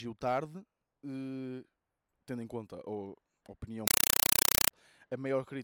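Right after "em conta a opinião", from 3.88 to 4.71 s, the speech gives way to harsh, loud chattering static: a compressed stream played as audio. An undecoded AC-3 stream, consistent with 192 kbps, plays as raw samples, with 4 ms noise bursts and silent padding repeating at 31.25 Hz.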